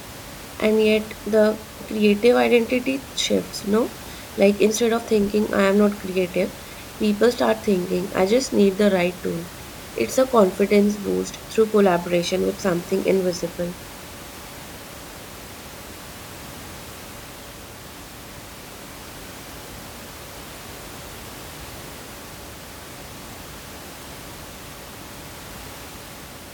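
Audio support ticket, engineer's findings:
Nothing stood out on listening to the speech, with the room's background noise sitting about 18 dB below it as part of the recording.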